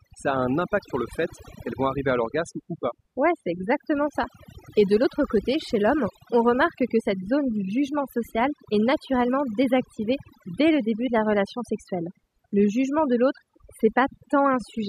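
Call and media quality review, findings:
Throughout, background collapses to near silence with twinkling specks between phrases. Overdone noise removal: suppressor set too aggressive, gating individual frequency bands near its noise estimate and taking quiet speech components down with them.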